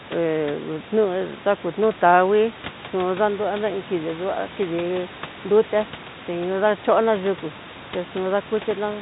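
Nothing goes wrong anywhere in this speech, so there's no fault to point to.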